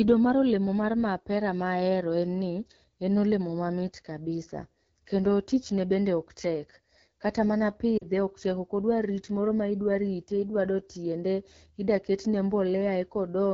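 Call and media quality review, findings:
Rough, raspy texture throughout, with a noisy, hissy top end. AMR wideband (HD Voice) codec at 8.85 kbit/s, one of its lowest rates. Too few bits for the pulse excitation to shape speech, and noise fills above 6.4 kHz.

Brief drop-out, 7.98 to 8.04 s, about 40 ms, which fits two 20 ms frames. Lost AMR speech frames from radio errors. The decoder repeats the last pitch and vocal tract settings at falling gain, so the sound fades quickly to near silence.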